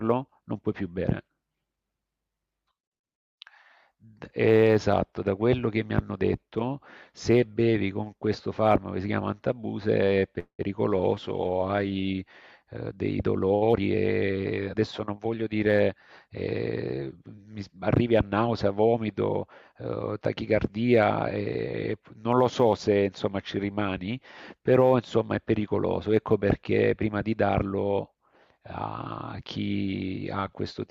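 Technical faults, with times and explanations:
10.39 to 10.61 s, call audio freeze: the sound stops and the last moment is stretched as a fading buzz for about 195 ms. It ends in a brief silence of about 90 ms. Then the audio resumes where it left off, with nothing lost. Late-arriving packets emptying the jitter buffer are the likely cause.
13.73 to 15.35 s, jitter buffer speed-up: the speech runs about 11 percent fast but keeps its pitch, so it sounds hurried. The receiver cut many tiny pitch-period slices, about a fifth of a second in all, to shed the delay built up just before.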